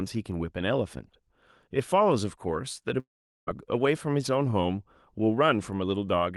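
Speech, interrupted by what is likely a long network dropout from 2.99 to 3.49 s: no audio arrived for about half a second, so the receiver stretched the last sound into a fading buzz that sinks to near silence before the speech resumes with that portion missing.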